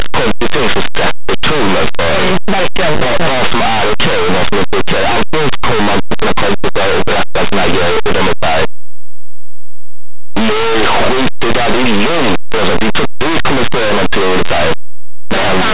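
From start to end, the speech is heard with loud, harsh distortion: linear audio read as companded. Plain 8-bit samples are being expanded as mu-law codes, so tiny values on one side of zero become huge peaks. Correct 8-bit coding would instead leave only faint, grainy hiss.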